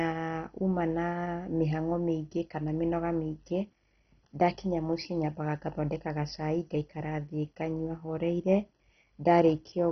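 Throughout the speech, nothing reaches above 6.1 kHz, and upper detail flickers in and out over a gurgling, granular grit. This is likely heavy MP2 compression: bit-starved upper sub-bands are switched off and the rest coarsely quantised, which fits a rate near 32 kbps.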